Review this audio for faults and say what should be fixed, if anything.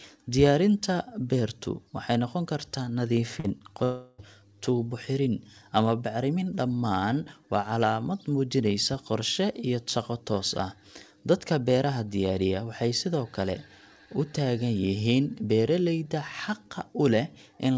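From 3.40 to 3.82 s there's repeated packet loss with a robotic sound. A run of short holes, the longest 40 ms, gets patched by stretching the previous audio, so about a quarter of that span is filled-in sound and comes out choppy. A deeper jitter buffer or forward error correction would ride this out.

Right after, from 3.84 to 4.20 s, roughly 340 ms is replaced by concealment: a smeared, fading buzz or hiss carrying the last sound forward, with the real audio never returning for that stretch. That points to a likely long network dropout. A steadier link, or redundancy on the stream, is the fix.

The upper band stops at 8 kHz, which fits G.722 at 64 kbps on the call path.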